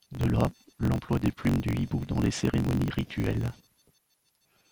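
Block size mismatch (truncated), throughout: block ends are discarded, fitting a 1024-sample read, producing a 46.9 Hz buzz and speech running 1.12 times fast.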